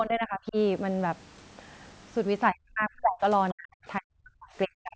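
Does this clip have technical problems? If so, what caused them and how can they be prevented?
Yes. Speech suppressed in double talk is heard from 0.0 to 0.56 s, from 2.51 to 3.22 s, and from 3.52 s to the end. The speech dips by around 20 dB in the first stretch and by roughly 40 dB later. This is likely an echo canceller that could not tell the local talker apart from loudspeaker echo while both sides spoke, so it turned everything down. Using a headset, or an echo canceller with better double-talk detection, prevents it.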